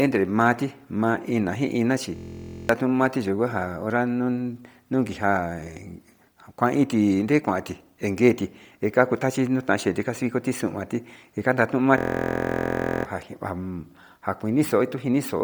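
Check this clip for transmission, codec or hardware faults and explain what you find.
Two problems here: a codec coloring the whole clip and a couple of freeze-ups. Throughout, the speech has a breathy, grainy edge, likely from heavy Bluetooth LC3 compression at a low bitrate. The codec zeroes much of the upper spectrum in its 10 ms frames and fills the gaps with noise, which gives the hiss-textured sheen on the voice.

The system hang loop hits twice: from 2.16 to 2.69 s, right after "ina chi", and from 11.98 to 13.05 s, right after "njanda tio". The machine stalled while the audio hardware kept replaying one 23.22 ms chunk, which fits a 1024-sample buffer. That gives a steady buzz at about 43 Hz and wipes out roughly half a second and then about a second of the speech.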